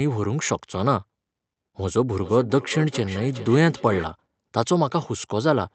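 It's a speech clip, and from 2.16 to 4.09 s there's a feedback echo between two devices: the speech comes back roughly every 400 ms, peaking about 14 dB below the talker and getting thinner with each pass. Another device in the same room is playing the call out loud, its sound leaks into this microphone, and the local echo canceller doesn't catch it because it only cancels what its own speaker plays. The whole thing also sounds band-limited to around 8 kHz, which fits an Opus call path running at about 32 kbps.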